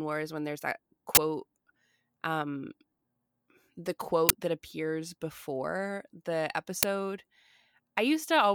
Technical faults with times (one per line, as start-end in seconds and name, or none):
1.15-1.17 uninitialised buffer
4.29 uninitialised buffer
6.83 uninitialised buffer